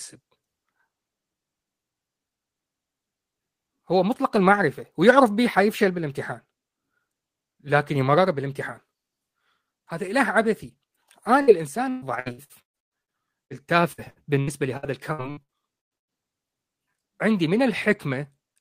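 At 11.41 s the speech breaks in a burst of packet loss lasting until 11.50 s. Several packets in a row never arrived in time. The receiver filled the hole by extending the last sound for about 60 ms and fading it down, which gives a short held buzz or hiss. When the speech returns, about 60 ms of it is simply gone.

From 11.89 s to 13.53 s there is repeated packet loss with a robotic sound. Around nine gaps follow one another, the longest about 120 ms. Each gap is patched with a stretched copy of the previous sound, so about 39% of this stretch is filler. The speech turns choppy, with pieces missing.

A second run follows from 13.92 s to 16.22 s, with around ten gaps up to about 118 ms and roughly 29% concealed.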